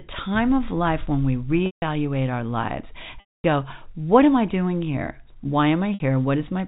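From 1.66 to 1.82 s ("of life when we"), 3.20 to 3.44 s (before "go what am I") and 5.94 to 6.00 s, packet loss with pitch repetition loops the last pitch period into a buzzy held tone. It shows as identical repeating waveform cycles and frozen horizontal harmonics, fading out in the 240 ms gap.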